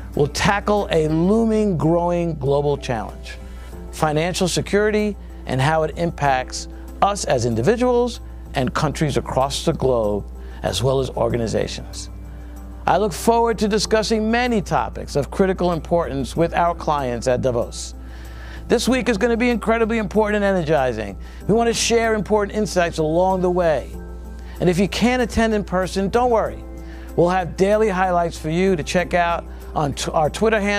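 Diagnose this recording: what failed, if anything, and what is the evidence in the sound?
Mains hum in the analogue wiring: a steady 60 Hz tone with low harmonics runs under the sound for the whole clip, sitting roughly 15 dB below it. A ground loop or nearby transformer is coupling the 60 Hz power line into the signal path.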